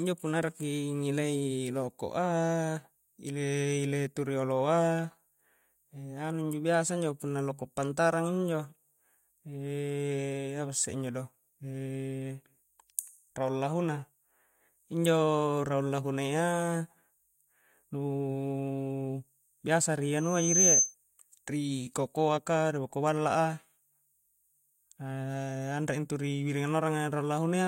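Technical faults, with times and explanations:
20.17–20.95 s, loudspeaker feedback squeal: a pure tone near 6.2 kHz rises out of the speech over roughly 0.4 seconds and peaks at about 10 dB above it. The microphone is re-amplifying its own loudspeaker, and loop gain exceeds unity at that frequency.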